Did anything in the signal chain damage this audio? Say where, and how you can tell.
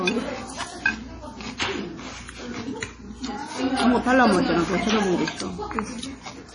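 Yes. Throughout, the sound is watery and swirling, with metallic chirps on bright detail, smeared attacks, and nothing above 10.6 kHz. This points to heavy damage at the codec stage, likely MP3 compression at a starved bitrate around 32 kbps, zeroing weak frequency lines frame by frame.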